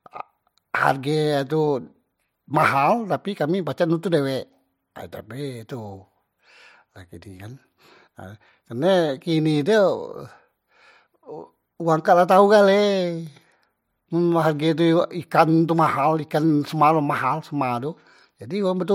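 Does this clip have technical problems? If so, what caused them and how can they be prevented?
Yes. Sample clock jitter runs through the whole speech clip. The converter's clock wanders by roughly a microsecond, so each sample is captured slightly early or late. Where the waveform changes fastest, that timing error becomes an amplitude error, heard as a fine hiss or grit riding on loud and bright passages, around 45 dB below the signal, and gone in the pauses. Prevention: clock the converter from a low-jitter reference with clean power and short, well-terminated clock lines.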